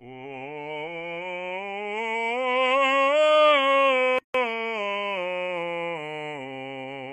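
At 4.19 s the music drops into a gap at a join of encoded pieces, silent until 4.34 s, about 159 ms. Two separately encoded sections were joined untrimmed, so encoder start delay and last-frame padding remain. The edges are smeared by the codec, and the music resumes where it stopped.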